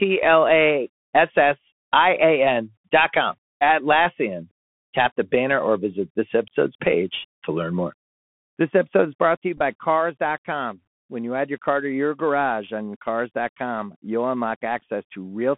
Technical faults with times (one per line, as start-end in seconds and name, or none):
0.00-15.58 Bluetooth CVSD headset codec
9.57-9.61 Bluetooth headset packet repeated